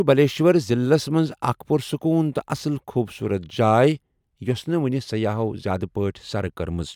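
No technical faults are audible.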